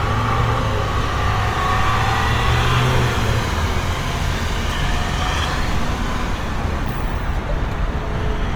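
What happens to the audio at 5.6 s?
At 5.6 s the sound carries Opus compression damage, and it runs through the whole clip rather than starting there. The cause is likely Opus in its music (CELT) mode at a low rate, around 24 kbps. Bandwidth stays full, reaching 20.2 kHz, so the sound isn't dulled. Instead, starved bands are refilled with folded or noise-like content, and tonal parts come out plainly rough, grainy and noisy.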